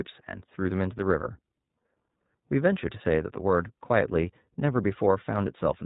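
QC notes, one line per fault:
throughout, iLBC codec: speech is band-limited below 4 kHz and plainly rough and synthetic, fitting independently coded 30 ms frames at 13.33 kbps.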